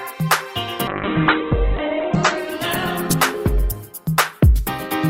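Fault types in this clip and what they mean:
Call bitrate drop: from 0.88 s the encoder falls from 96 to 8 kbps and the band narrows from 20 kHz to 4 kHz. Unlike plain low-pass filtering, it also sounds coarse and watery.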